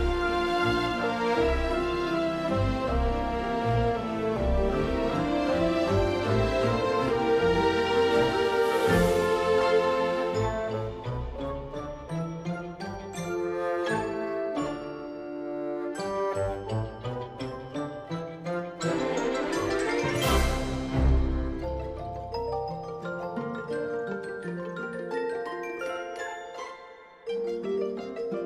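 Nothing in this audio stands out as a technical problem; it all holds together with nothing worth flagging.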